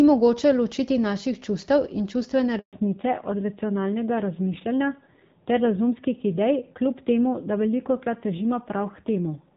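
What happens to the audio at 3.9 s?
By 3.9 s you're already into a fallback to narrowband, which kicks in at 2.73 s right after "naših čustev in čustvene" and runs to the end. The call drops from AMR-WB at 12.65 kbit/s to AMR-NB at 7.4 kbit/s, so everything above 4 kHz is gone and the speech sounds duller and rougher.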